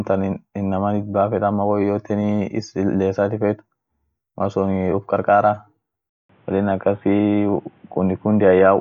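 At 6.09 s the speech drops out for 200 ms. When it returns, it sounds dull and boxy. Nothing above 3.8 kHz remains, so the crisp upper detail is gone. A faint new background noise sits well below the speech. The loudness stays about the same. This lasts from 6.09 s to the end at 8.80 s. The likely cause is the input switched to a poorer device, one with a narrower band and its own noise.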